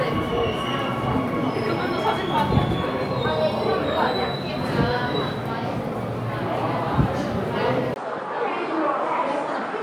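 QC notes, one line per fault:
7.94–9.83 s, input switched to a poorer device: after a 20 ms gap, nothing above 9.5 kHz remains, level drops about 5 dB, and a faint new noise floor appears, likely from a narrower-band input taking over.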